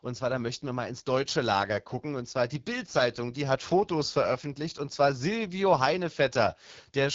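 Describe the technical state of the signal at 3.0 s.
At 3.0 s the speech is still passing through an AMR wideband (HD Voice) codec, as it is for the whole clip. The encoder models the voice as pulses driving a vocal tract filter up to 6.4 kHz and fills the band above with shaped noise, with nothing at all above 7.5 kHz. The plainly audible rough, raspy grain fits one of the codec's lowest modes, around 8.85 kbit/s.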